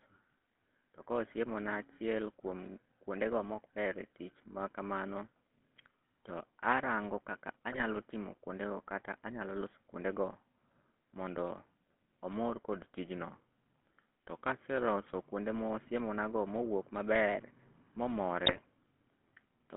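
Throughout, the GSM full-rate codec models the vocal tract with coarse pulse excitation, giving the speech a buzzy, gravelly roughness in a 200 Hz to 3.4 kHz band that fits 13 kbps.

From 7.72 to 7.83 s and again from 18.46 to 18.65 s, GSM bit errors corrupt the decoder's filter, pitch and gain values for a run of frames, breaking the speech into squawks, pops and gargling.

From 12.78 to 15.26 s, a drift correction step, likely a clock-matching rate change, slows playback by 5.9% and drops pitch by about a semitone before it snaps back.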